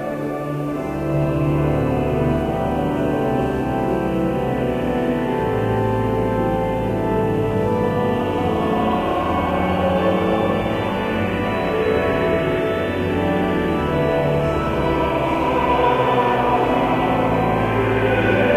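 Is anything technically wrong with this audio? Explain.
No, nothing technically wrong can be heard in this audio. There are no faults to report anywhere in the recording.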